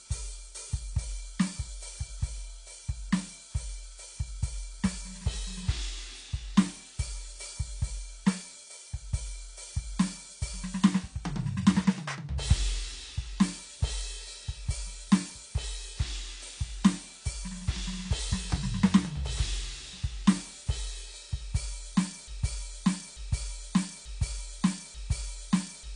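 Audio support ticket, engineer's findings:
Dull, smeared music with nothing above 10 kHz and fizzy, warbling sustains throughout; a fixed cut-off rather than filtering, likely AAC compression at around 32 kbps.

Broken-record loop from 22.28 s to the end: an exact 0.89 s fragment repeats four times back to back, unlike a stutter. Likely stalled player or stream resending its last buffer; the music that should follow is lost.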